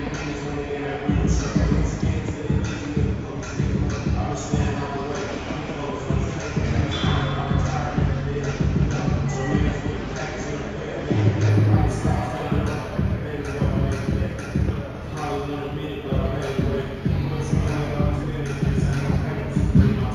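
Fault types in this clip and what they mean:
Imaging from linear upsampling: straight-line interpolation dulls the top band and leaves faint mirror images at 8–16 kHz, about 40 dB down, from 11.5 s.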